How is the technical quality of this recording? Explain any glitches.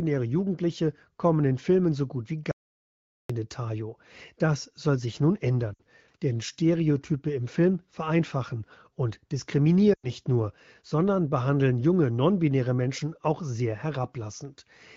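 The recording has three glitches: one hard cut to silence and two short bursts of lost frames. All of it rides on a wideband phone-style codec with the bright, slightly processed quality of HD Voice coding.

The audio dropout to silence runs from 2.51 to 3.30 s, right after "so gut wie." The sound stops dead for about 0.78 s, with silence and no room tone, then picks up mid-flow. That points to the input likely being cut off while the recorder kept writing silence.

The lost AMR speech frames show up twice. At 5.73 to 5.82 s, just after "soll sich nun," roughly 60 ms (which fits three dropped 20 ms frames) drops to near silence. At 9.93 to 10.11 s, just before "nur sondern behandeln junge," about 100 ms (which fits five frames) drops to near silence. In both, the decoder is patching over corrupted radio frames by repeating the last good settings at falling gain, so you get a brief drop to near silence before the speech snaps back a bit thin.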